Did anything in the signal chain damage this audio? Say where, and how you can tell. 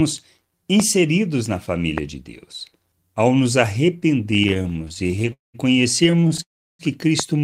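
Yes. Three kinds of damage can be heard, all after the audio was captured except the pops.

Loud pops at 0.80–0.82 s, 1.98–2.00 s and 7.20–7.22 s each stand about 15 dB above the speech. The likely cause is a voltage step in the analogue wiring, such as a plug, switch or static discharge. Unlike a dropout, the speech carries on underneath each pop.

Repeated stalls (stutter) run from 4.31 to 5.33 s, with 26 gaps of up to 22 ms, and from 6.04 to 6.40 s, with 7 gaps of up to 25 ms. About 29% of each span is concealed. Late packets kept emptying the jitter buffer, so the speech drags but nothing is lost.

Call audio freezes at 5.33–5.56 s and 6.42–6.81 s are single long waits, not many short ones. The last sound is held and then falls silent for 160 ms and 340 ms. These were likely caused by packets delayed in the network. Speech resumes where it stopped, pushed 0.21 s and 0.37 s later.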